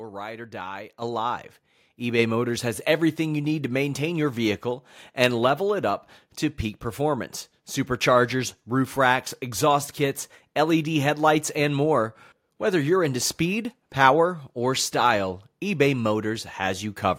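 At 1.02 s, just after "ride or die", the microphone volume is stepped up by about 8 dB, and at 2.19 s it steps up again by about 4 dB. The input level was raised in single jumps rather than a smooth ramp, so the speech and the background noise floor rise together at the same instant. That shared, sudden rise is what separates it from a talker simply speaking louder, where the background would stay put.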